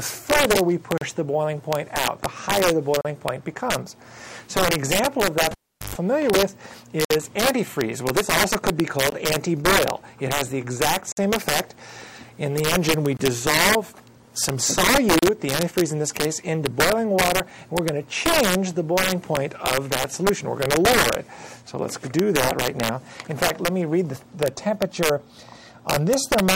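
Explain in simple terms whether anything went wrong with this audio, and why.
Several things went wrong. First, an integer overflow: when the signal got louder than the digital number range could hold, the values wrapped around to the opposite extreme instead of being held at the limit. On the loudest peaks, a small share of the audio, this produces harsh, violent cracks, much sharper than ordinary distortion.

Second, there is a gap between stream segments. The audio arrives in 2-second pieces, and their timing leaves short holes that the player fills with silence. You hear abrupt dropouts, about 22 to 57 milliseconds long, at 0.98, 3.01, 7.05, 9.10, 11.12, 13.17 and 15.19 seconds. Nothing is actually missing from the audio.

Third, at 5.51 seconds a cable was pulled and plugged in while live. There is a pop, then nearly 0.4 seconds of near silence, including a burst of 50 Hz mains buzz lasting about 0.12 seconds while the plug was only half in. 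Another pop follows as the sound returns at 5.95 seconds.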